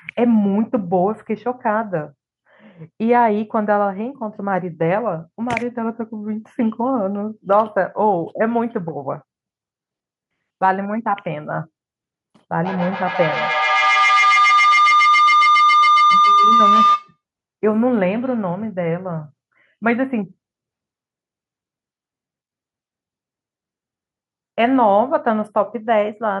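From 12.51 to 17.18 s, feedback howl: a loop re-amplifies into a tone near 1 kHz, pulsing roughly every 150 ms, growing where echo fades.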